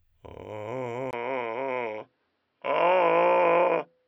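At 1.11 s the music drops out for about 20 ms, then returns dull and boxy to the end, with nothing above 5.6 kHz and a faint new background noise sitting well below the music. The loudness stays about the same. This is likely an input switched to a poorer device, a different microphone or headset path. Unlike a plain filter or a codec narrowing its band, the short gap and the fresh noise floor mark a change of source hardware.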